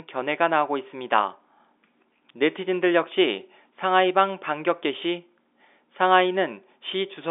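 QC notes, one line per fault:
Nothing to flag here; the speech just sits in its usual narrow telephone band, with nothing up top past roughly 3.7 kHz, and no problems turn up anywhere along the way.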